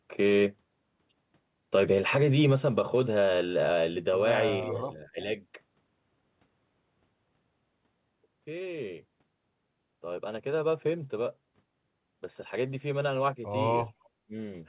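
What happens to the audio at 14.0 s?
From 13.87 to 14.09 s a faint, delayed copy of the speech surfaces, trailing the original by 338 ms and sitting far below it. This is likely echo leak, from a far-end loudspeaker the echo canceller didn't fully suppress. Unlike room reverberation, it is a distinct late repeat, not a smooth decaying tail.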